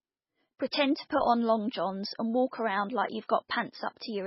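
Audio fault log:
Throughout: likely MP3 compression. The speech has nothing above 5.6 kHz and sounds heavily watery and swirly, which fits a very low bitrate near 16 kbps.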